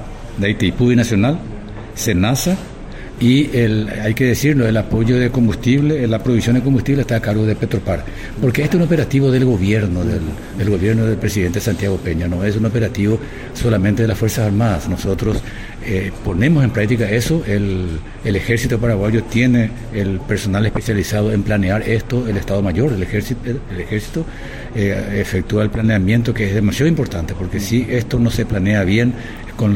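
No technical faults are audible anywhere in the clip.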